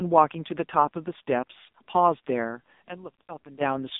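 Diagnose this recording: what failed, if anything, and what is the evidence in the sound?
Two things failed: the codec stage and the acoustic path at playback.

The whole clip has passed through an AMR narrowband mobile codec. The speech sits in a line band of roughly 200 Hz to 3.7 kHz. Nothing comes through above 3.8 kHz. Codec damage is heavy. Voiced sounds turn buzzy and synthetic because the codec rebuilds them from a vocal-tract model driven by sparse pulses. That degree of damage fits AMR-NB's low 5.9 kbps mode.

From 2.53 s to 3.66 s a loudspeaker feedback squeal rises over the speech. It is a single tone at 5.6 kHz. It swells to full strength in under half a second and then sits about 10 dB above the speech. A microphone was picking up the loudspeaker it fed, and the loop gain passed unity at that frequency. The tone lies well above the codec's ceiling, so this loop formed after decoding, at playback.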